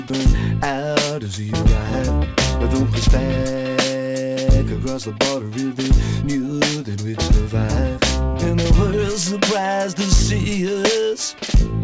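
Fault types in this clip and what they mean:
Sound dropped by the voice detector: right at the start, from about 0.08 to 0.10 s, a 20 ms sliver of the sound gives way to a thin, steady comfort-noise fill before the signal picks up again. The likely cause is the sender's voice detector briefly treating the opening as background and pausing transmission, with the receiver filling the gap. The surrounding audio stops at 8 kHz, which fits a G.722 call path at 64 kbps.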